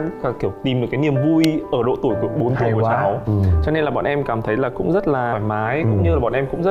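There's a single sharp snap at 1.44 s, an electrical switching spike that lands on top of the sound for only a couple of milliseconds. It's loud for its size, peaking not far below full scale. The likely culprit is a nearby switch, motor or static discharge arcing and the audio line catching that burst of interference as a click.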